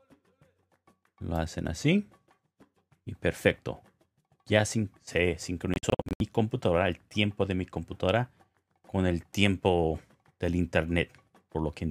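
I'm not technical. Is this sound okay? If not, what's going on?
No. The wireless link to the headphones likely couldn't deliver the audio in time, so the headphones threw some chunks away. This is called a Bluetooth dropout. Between 5.74 and 6.21 seconds, the sound cuts out in several short, sharp gaps, the longest about 70 milliseconds, adding up to roughly a quarter of a second of missing audio. After each gap the sound picks up further along, as if it had kept playing during the silence.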